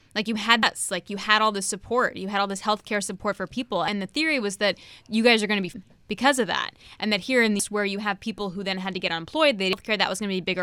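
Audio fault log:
0.63 s, 3.88 s, 5.74 s, 7.60 s, 9.73 s: damaged data in a compressed stream. Brief chirps or blips, as the decoder loses frame sync and jumps to the next header.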